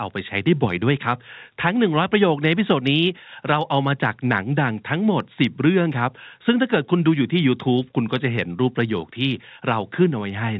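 Nothing goes wrong anywhere in this speech recording, which sounds like an ordinary telephone call with the narrow, bass-light band that comes from the call's microphone processing and the A-law phone coding, and no fault can be heard at any point.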